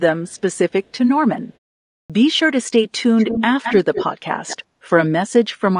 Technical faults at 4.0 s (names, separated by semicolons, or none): low-delay AAC compression; echo leak